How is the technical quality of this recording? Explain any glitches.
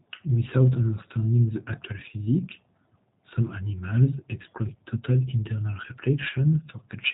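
The recording has plainly audible codec damage from start to finish. The whole clip went through the G.729 codec, which fits an 8 kbit/s voice-over-IP link. The codec discards the real waveform and rebuilds the speech from a vocal-tract filter, a pitch predictor and a few pulses per frame, and it passes nothing above 4 kHz. The speech stays intelligible but sounds muffled, slightly rough and synthetic.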